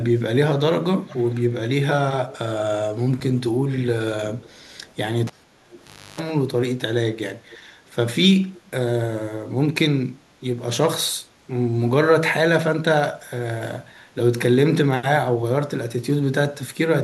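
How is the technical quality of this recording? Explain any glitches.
The recording has two kinds of fault: a recurring echo leak and one cable pulled and plugged in.

The echo leak comes at 1.06 to 1.37 s, 2.3 to 2.38 s, 4.41 to 4.93 s, 5.71 to 5.8 s and 7.5 to 7.58 s. A faint copy of the speech returns 450 ms late, well below the main signal. It is likely a loudspeaker echo the far end's canceller failed to remove.

The cable pulled and plugged in spans 5.27 to 6.2 s. A pop cuts the audio to near silence for about 0.88 s. Then a 50 Hz mains buzz lasts about 0.31 s while the plug makes partial contact. A second pop marks the sound's return.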